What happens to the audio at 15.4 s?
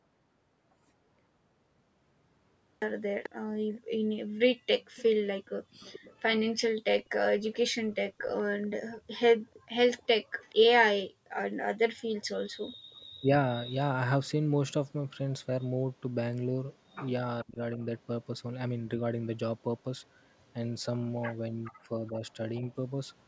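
At 15.4 s the speech carries on intact, with nothing breaking up, dropping out or distorting at that point.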